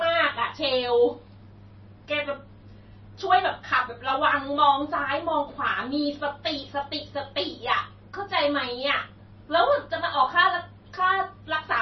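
From start to finish the speech carries MP3 compression damage, and heavy damage at that. Nothing survives above 5.9 kHz, so sibilants sound dull and clipped, while the remaining band has a watery, swirling quality as weak detail flickers in and out between frames. On a spectrogram this shows as a hard, flat ceiling at 5.9 kHz with patchy, blocky holes below it. The likely cause is a starved encoder, which fits a bitrate around 24 kbps.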